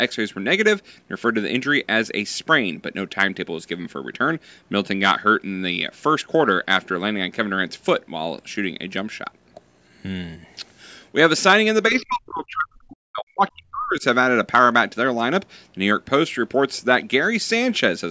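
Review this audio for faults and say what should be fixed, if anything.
From 11.9 to 14.0 s the speech dips, sinking by roughly 40 dB at its worst. That's speech suppressed in double talk, likely because the echo canceller couldn't separate this talker from loudspeaker echo while both sides spoke. Retuning the echo canceller's double-talk detection, or adding better acoustic isolation between speaker and mic, should keep it from happening.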